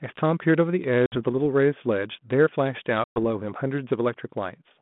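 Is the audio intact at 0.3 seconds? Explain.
Yes, the audio is intact at 0.3 s, with nothing there beyond the narrow telephone band and light coding texture of the 32 kbit/s G.726 ADPCM path it passes through.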